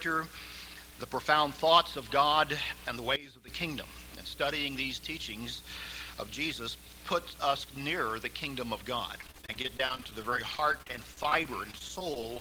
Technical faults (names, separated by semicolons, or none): sudden gain jump; repeated packet loss (robotic sound)